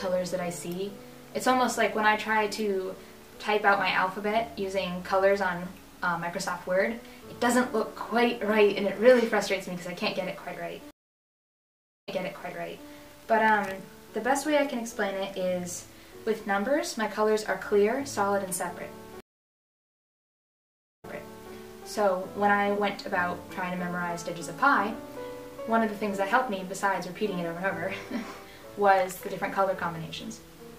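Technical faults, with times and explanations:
10.91–12.88 s and 19.20–21.53 s, stream reconnect. The connection dropped and the sound went silent, for 1.14 s and then 1.80 s. A fresh decoder restarted mid-stream. The sound resumed earlier, repeating 0.84 s and 0.52 s, as the server resent buffered audio.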